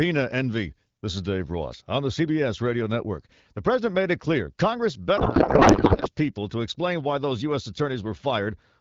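A speech clip carried over AMR wideband. From 5.17 to 6.09 s, just before "people to explain why", the speech turns to garbled noise and warble that barely tracks it. This is a codec payload misread. The decoder unpacks the bits in the wrong layout, which fits octet-aligned AMR being read as bandwidth-efficient.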